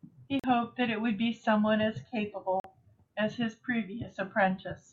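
At 0.40 s and again at 2.60 s the speech cuts to silence for about 43 ms, then resumes further along, as though it kept playing underneath. These are likely Bluetooth dropouts, where late packets were discarded; each gap fits roughly two lost packets.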